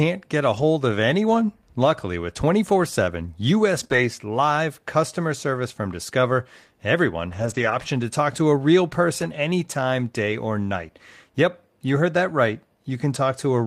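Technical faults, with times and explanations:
0.57–0.63 s (between "get a" and "of anyone"), 3.79–3.98 s (before "live customer service from"), 7.3–7.8 s, 9.2–9.26 s (after "talk to a real"), 10.32–10.34 s, lost packet rebuilt from error correction: no gaps, but each stretch turns rougher and noisier as the decoder plays low-bitrate redundant copies carried in the following packets. The 0.5 s stretch at 7.3 s is the longest.
3.87–3.91 s, short concealed packet loss: inside the rebuilt stretch, about 20 ms never arrived in time and has no redundant copy, so the receiver extrapolated from the preceding sound and crossfaded back, leaving a brief smear.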